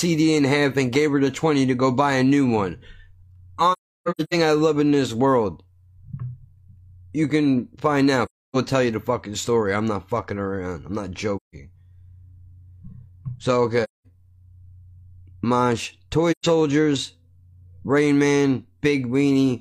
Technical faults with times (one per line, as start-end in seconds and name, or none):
3.72-4.34 AAC frame loss with muting
8.25-8.56 AAC frame loss with muting
11.36-11.55 AAC frame loss with muting
13.83-14.06 AAC frame loss with muting
16.31-16.46 AAC frame loss with muting